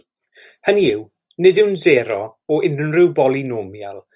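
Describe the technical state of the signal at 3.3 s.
At 3.3 s the speech signal is intact, with no audible dropout, distortion, noise burst or other fault at that moment.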